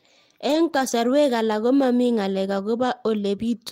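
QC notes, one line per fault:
0.47–0.93 s and 2.57 s: lost packet rebuilt from error correction. No gap is heard. The longer stretch and the brief single frame play from low-bitrate redundant copies carried in the following packets, so the speech there sounds rougher and noisier than its surroundings.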